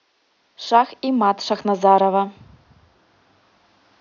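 No technical faults are audible in this speech recording; the only background is the room's own noise, sitting about 47 dB below the speech.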